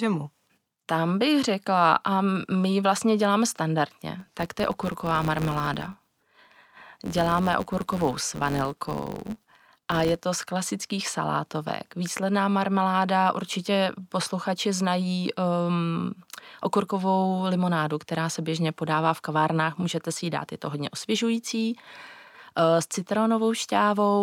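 From 4.20 to 10.21 s a filter restarted on every block, discarding its stored state at each boundary and starting again from silence. Each restart leaves a small transient, heard as a 93.8 Hz buzz, fitting a 512-sample block, that tracks the speech level, beginning just before "z klasických salátovek".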